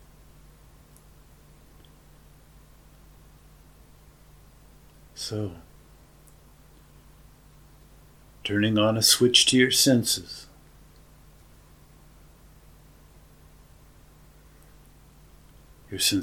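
The signal carries no audible technical faults at any point.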